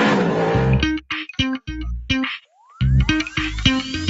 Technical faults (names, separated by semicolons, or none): sound cut by the noise suppressor